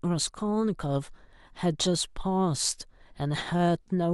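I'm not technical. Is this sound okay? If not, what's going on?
Yes, nothing technically wrong can be heard in this recording.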